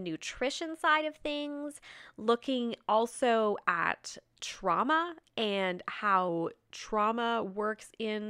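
Speech, with two drift correction steps: from 0.36 to 2.26 s it runs about 6% fast and roughly a semitone sharp until just before "also at trauma and", then from 6.29 to 7.49 s, after "also at trauma and", it drops about 6% slow and a semitone flat. Likely clock-sync software jolting the rate to rebalance its buffer.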